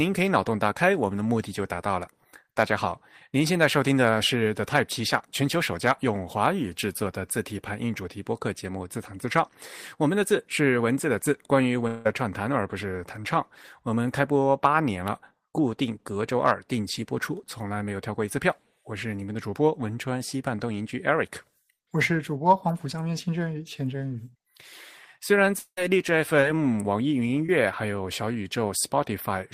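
Long network dropout, the likely cause of two gaps in this speech clip at 11.87–12.07 s and 25.59–25.79 s: about 180 ms of audio is lost each time. The last sound is stretched into a fading fill, and in the second gap it gives way to about 70 ms of silence before speech resumes beyond the missing part. Short concealed packet loss occurs at 26.41–26.44 s and 27.46–27.50 s, where about 20 ms of the stream failed to reach the decoder in time. The receiver extended the preceding sound to cover each hole and then blended back into the real audio, leaving a brief smear or wobble.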